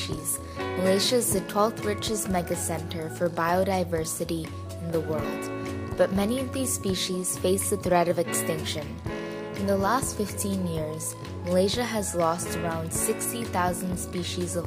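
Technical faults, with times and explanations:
No technical faults can be heard anywhere in the signal.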